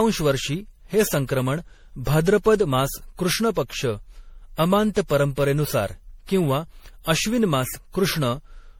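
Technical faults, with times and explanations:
Throughout, generation loss: the speech sounds swirly, smeared and hollow, with consonant attacks blurred and no content above 19.8 kHz. This most likely comes from repeated lossy encoding, around seven passes through an MP3 encoder at a rate that fits 64 kbit/s. Each decode and re-encode quantises the signal again on a shifted frame grid, so the noise and spectral holes from every pass stack up and degrade the sound well beyond what that bitrate would cause in a single pass.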